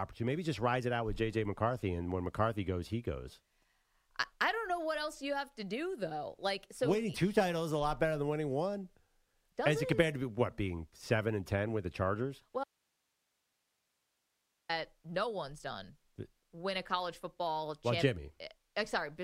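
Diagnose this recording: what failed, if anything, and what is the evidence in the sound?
The speech drops out abruptly at 12.64 s and returns at 14.69 s, just before "no one's done win". This is an audio dropout to a faint residue: only hiss remains, about 50 dB down, not digital silence. The cause is likely an intermittent analogue connection upstream of a still-live input.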